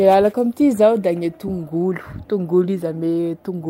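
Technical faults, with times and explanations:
No technical faults are audible anywhere in the speech.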